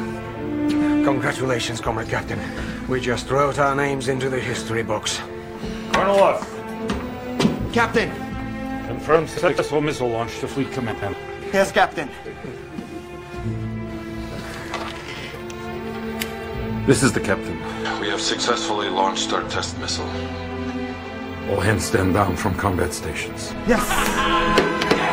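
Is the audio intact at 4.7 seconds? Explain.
Yes, at 4.7 seconds the audio plays through intact, with no dropout, click, distortion or other audible fault at that moment.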